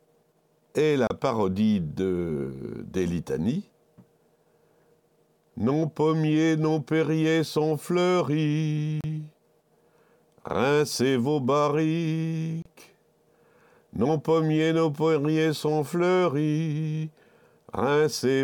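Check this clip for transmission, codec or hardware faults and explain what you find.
Three short digital broadcast dropouts occur, at 1.07–1.11 s, 9.01–9.04 s and 12.62–12.66 s. Each time the receiver lost valid frames and muted until good ones returned, so the sound cuts to silence for 32 ms, which fits a single lost frame. Whatever was sent during each gap is gone.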